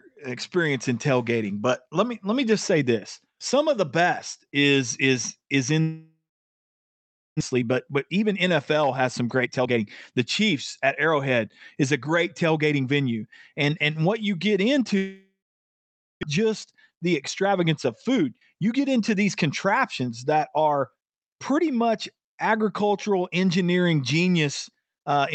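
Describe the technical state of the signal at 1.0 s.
At 1.0 s the speech is intact, with nothing wrong beyond the ordinary coding noise and the top end stopping around 8 kHz that come with passing through a normally working WebRTC call path.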